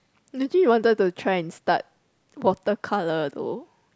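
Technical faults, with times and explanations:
No technical faults can be heard in this speech clip. There is nothing in it to flag or time.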